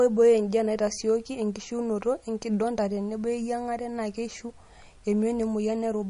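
From start to end, the speech carries plainly audible damage, likely from MP3 compression. Nothing is present above 10.6 kHz. The treble stops dead at that point. The damage suggests a low bitrate, around 40 kbps. With so few bits, the encoder drops weak frequency lines. Those lines flicker on and off between frames. The result sounds watery and swirly. S sounds turn metallic and chirpy. Consonant attacks smear instead of landing cleanly.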